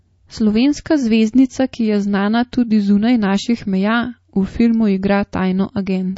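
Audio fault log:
Throughout: MP3 compression, plainly audible. Nothing is present above 7.7 kHz, so the speech sounds dull, and weak spectral detail flickers between frames with a watery, swirly texture and metallic chirps on s sounds. This likely comes from a starved encoder, consistent with roughly 32 kbps.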